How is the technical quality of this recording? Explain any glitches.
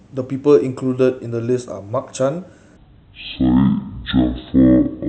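The recording has one clear fault: a section at the wrong speed from 2.77 s to the end at 5.08 s. The player or editor likely ran this part against the wrong clock at half speed, so the speech drags slow and drops about ten semitones, deep and drawn out.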